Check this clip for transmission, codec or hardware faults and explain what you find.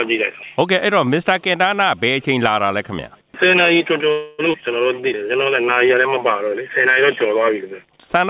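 Three transmission faults sit close together around the middle of the clip, all on audio that has passed through a narrowband call path whose content stops at 4 kHz, which fits G.711 mu-law coding.

Call audio freeze, 4.12 to 4.41 s: The receiver held the last sound for about 265 ms as a fading buzz or hiss, likely because packets stalled and the jitter buffer ran dry. Nothing is lost; playback resumes where it stopped. A spectrogram shows smeared, decaying repeated texture; the waveform shows a tapering envelope.

Skip ahead, 4.53 to 4.56 s: Playback jumps forward, dropping roughly 150 ms of audio with only a tiny bridged join. Later audio was already queued, so the lost stretch was discarded. It sounds like an abrupt clipped transition. The spectrogram and waveform both show a sudden discontinuity.

Jitter buffer slow-down, 4.94 to 6.95 s: The buffer rebuilt its reserve by repeating single pitch periods, adding 146 ms and playing at 93% speed with unchanged pitch. 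Sounds are drawn out. A spectrogram shows stretched harmonics at constant spacing, and the waveform shows near-identical repeated cycles.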